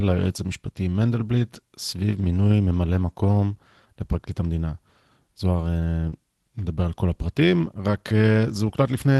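At 6.09 s there's a short concealed packet loss running to about 6.14 s. Roughly 20 ms of the call didn't reach the decoder in time, so the receiver papered over it by extending whatever sound came just before, then crossfaded back into real audio, about 25 ms of filled-in material in all. You hear it as a quick smear or wobble in the speech rather than an outright dropout.

Overlapping the tail of that, from 6.12 to 6.14 s, there's a lost packet rebuilt from error correction. One packet went missing, but the next one carried a low-bitrate spare copy, so the decoder played that instead of leaving a gap. Those 20 ms come out a bit rougher and grainier than the surrounding audio, on a call path reaching up to about 12 kHz.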